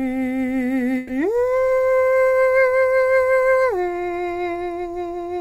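At 0.97 to 1.11 s, a burst of packet loss: about 120 ms of music is lost, the last sound is held and fading, then playback resumes further on.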